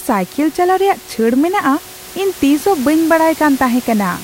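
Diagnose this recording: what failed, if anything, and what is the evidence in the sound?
No fault found.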